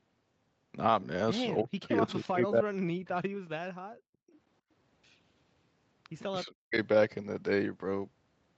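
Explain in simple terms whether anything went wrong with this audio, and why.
Between 1.62 and 3.27 s, and again from 6.44 to 6.77 s, the speech sinks to near silence in patches while another talker is active. This is likely speech suppressed in double talk: the echo canceller confused the talker with loudspeaker echo and turned both down.

From 3.94 to 4.33 s the room background drops out sharply for under half a second, then comes back. That is background gated by the echo canceller, which clamped the microphone hard while the loudspeaker was playing.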